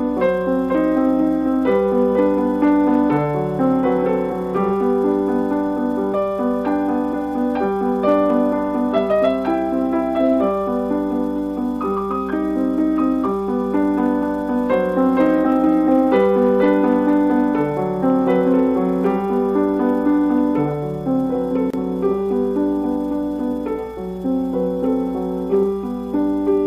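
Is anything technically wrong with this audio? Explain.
No, nothing technically wrong stood out on listening to this audio.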